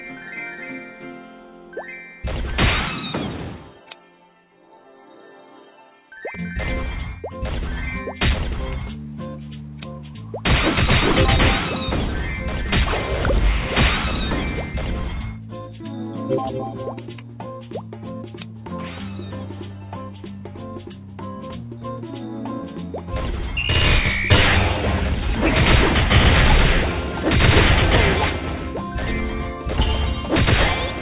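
No faults can be heard in the audio, which has the narrowband character of a telephone-grade call path, with nothing above 4 kHz, consistent with G.711 A-law coding at 64 kbps.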